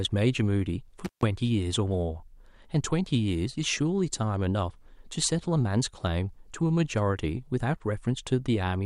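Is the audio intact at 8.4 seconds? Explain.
Yes, the speech at 8.4 seconds plays through intact, with no audible fault at that moment.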